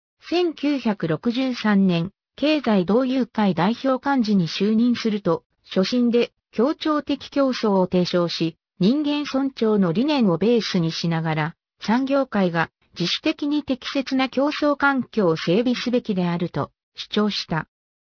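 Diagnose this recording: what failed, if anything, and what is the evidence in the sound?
Aliasing at the sample-rate conversion stage, throughout. Content above 5.5 kHz folds back as gritty, unrelated tones, roughly 15 dB down. This fits an unfiltered downsample to 11 kHz.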